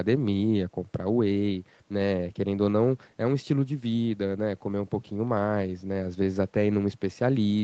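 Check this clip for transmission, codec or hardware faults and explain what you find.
No faults are audible in this speech recording.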